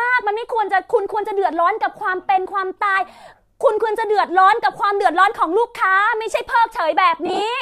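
Speech recorded over a Bluetooth LE Audio link, with light graininess that likely comes from LC3 coding at a moderate bitrate, has lost LE Audio frames between 7.26 and 7.42 s. About 90 ms of audio is missing, scattered across roughly 160 ms in short dropouts, the longest around 30 ms. That fits about a dozen 7.5 ms frames. The decoder fills each gap by repeating the last spectrum with randomised phase, so the sound briefly turns into a noisy, smeared texture rather than cutting to silence.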